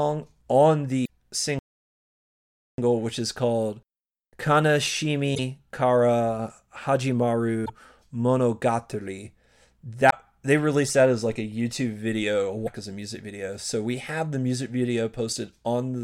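At 1.05 s the speech breaks into a short glitch lasting about 44 ms, the first of five such blips from damaged data in a compressed stream, recurring at 5.32, 7.62, 10.07 and 12.64 s. Corrupted frames are misread, the decoder loses sync and resumes at a later frame header, leaving a brief glitch. From 1.59 to 2.78 s the speech cuts to silence for about 1.19 s, then continues. This is a playback stall, likely the player running out of buffered data.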